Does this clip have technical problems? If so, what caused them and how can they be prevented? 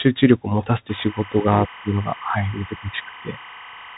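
Yes. Throughout, the speech sounds muffled and scratchy, with granular hiss and nothing above 3.8 kHz. This is the Bluetooth CVSD headset codec, whose one-bit step coding fits a 64 kbps link. Recording through a wideband codec or a wired microphone would prevent it.

From 0.89 s to the end, a steady chirping warble sits roughly 20 dB below the speech, switching between pitches near 1 and 2 kHz at a 25-frame rhythm. This is timecode bleed, with linear timecode leaking in from a neighbouring track or cable. Separating timecode and audio cables and isolating the timecode track would prevent it.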